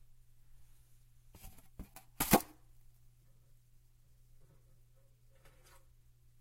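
No technical faults heard anywhere in the recording; nothing to report.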